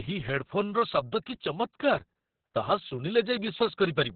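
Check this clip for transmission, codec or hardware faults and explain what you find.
There's one fault, running the whole clip: Opus voice compression, and fairly heavy. Everything above about 4.4 kHz is gone, so the speech sounds narrowband and muffled. The SILK coder's coarse excitation adds a hoarse, slightly robotic edge, which fits a very low bitrate, around 6 kbps.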